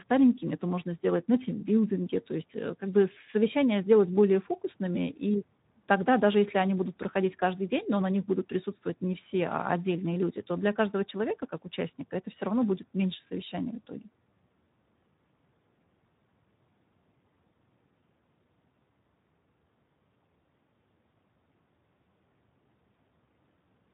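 From start to finish the speech carries Speex codec damage, plainly audible as a hoarse, noisy grain, with the low-rate CELP coder starving the excitation of bits, which fits a bitrate around 11 kbps. Nothing survives above 3.8 kHz, so the sound is narrow and muffled. A spectrogram shows a hard ceiling at 3.8 kHz with blank space above, and harmonics below it look smeared and fuzzy instead of cleanly striped.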